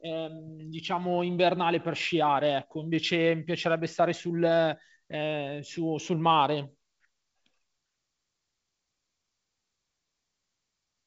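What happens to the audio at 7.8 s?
Nothing goes wrong at 7.8 s; the speech there is intact, carried by G.722 wideband telephone coding that leaves only a faint trace and keeps the band below about 7.7 kHz.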